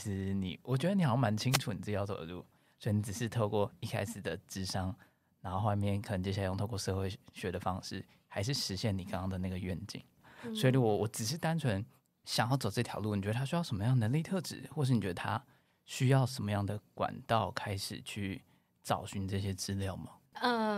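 At 1.50 s a wireless microphone noise hit lasts about 90 ms: the FM radio link fades as reflected paths cancel, receiver noise surges, and a brief swish of static is heard. A spectrogram shows a broadband vertical smear; the waveform shows a short noisy burst.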